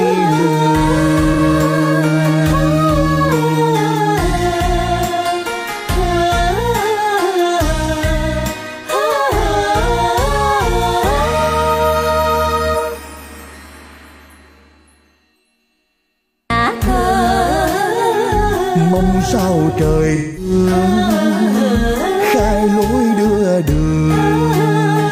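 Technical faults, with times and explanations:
1.33–1.38 s and 20.15–20.51 s, AAC frame loss with concealment: the decoder lost data and patched the gap from the last good spectrum. The 43 ms gap, about one frame, is a brief smeared, noisy blip. The 213 ms gap, about five frames, fades toward silence before the audio returns.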